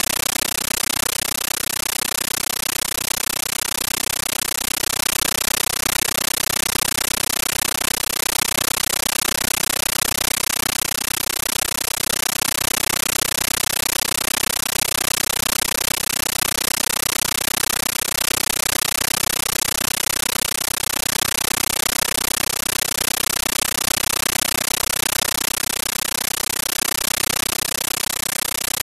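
Throughout, loud chattering static replaces the speech: a compressed stream played as audio. An undecoded AC-3 bitstream arrives as raw samples, each 13.3 ms noise burst followed by silent padding, 31.25 times a second. That steady rhythm sets it apart from random hiss.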